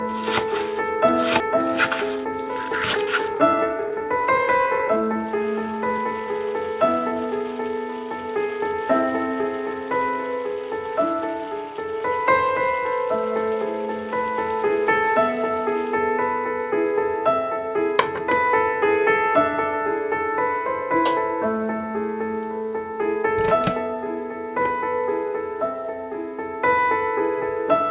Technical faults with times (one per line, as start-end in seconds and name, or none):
1.40-1.42 skip ahead
1.50-6.28 jitter buffer speed-up